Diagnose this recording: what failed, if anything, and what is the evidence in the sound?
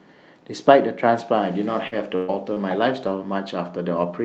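Repeated packet loss (robotic sound) runs from 1.87 to 4.04 s. This is a network-stage fault on a call path whose Opus codec limits the audio to about 8 kHz. Three holes open in the speech, the longest 124 ms, with roughly 180 ms missing in total. The jitter buffer's concealment stretches the last good sound across each hole, rebuilding around 200 ms. That repeated patching produces the choppy, robotic texture.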